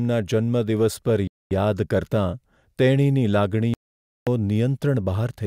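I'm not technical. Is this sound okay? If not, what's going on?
No. The speech cuts out twice, and the likely cause is a Bluetooth stall: the wireless link between the phone and the headphones got held up, so the headphones ran out of sound to play and had to wait. You hear this as sudden silence, from 1.27 to 1.51 seconds (about a quarter of a second) and again from 3.74 to 4.27 seconds (about half a second), before the speech picks up again.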